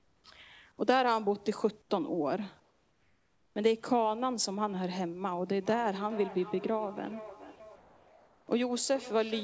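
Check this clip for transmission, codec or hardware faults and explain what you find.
Three kinds of fault turn up in this speech, over a band that stops at 8 kHz, which fits G.722 at around 64 kbps.

Comfort noise in place of the background shows up at 0.00–0.24 s, 1.82–1.90 s, 2.60–3.56 s and 7.76–8.48 s. The real room tone drops out for a flat, featureless hiss about 3 to 6 dB quieter. That's likely discontinuous transmission, with the receiver synthesising noise during pauses.

Feedback echo between two devices runs from 5.51 s to the end. Each phrase comes back about every 0.4 s, thin and ringy, peaking about 16 dB under the speech. A second device in the room is replaying the call into the microphone, and neither echo canceller can catch it.

Sound dropped by the voice detector happens at 7.56–7.60 s. About 30 ms of sound vanishes into steady noise, likely because the detector mistook it for background and paused sending until it triggered again.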